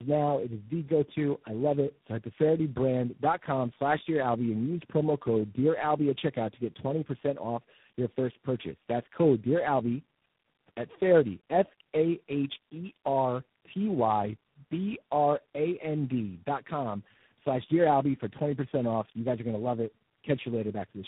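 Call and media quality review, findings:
Tandem speech coding, throughout. Rough, muffled, warbly speech, nothing above 3.8 kHz. Three speech codecs in series (AMR-NB 6.7 kbit/s, G.729A 8 kbit/s, G.726 24 kbit/s) with G.711 legs between. Each re-encode compounds the last, so it is worse than any single low-rate codec.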